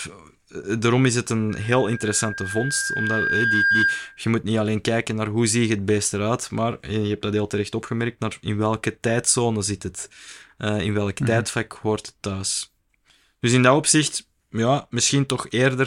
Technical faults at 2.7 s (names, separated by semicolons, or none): loudspeaker feedback squeal